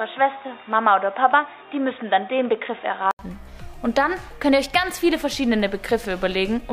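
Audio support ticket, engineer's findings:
Input switched to a poorer device, 0.0 to 3.19 s. Audio band-limited, nothing above 3.8 kHz, dull and boxy. About 80 ms of silence at 3.19 s, then full bandwidth returns. Likely cause: capture path on a narrower-band microphone or headset call profile, then handed back to the main input. Different background noise under the narrowband section, roughly 35 dB below signal. No audible level jump across the switch.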